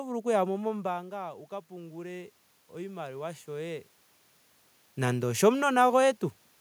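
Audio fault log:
1.68–3.95 s, automatic gain rising: after "oku yamo mombaanga wuka" the level reaching the microphone falls by about 13 dB, and the gain control responds by slowly turning its gain up by about 5 dB over more than two seconds. Because the whole input is amplified, the voice and the room noise swell together rather than the voice alone recovering. The talker's own movements around 0.5 s and 4 s are separate, natural level shifts.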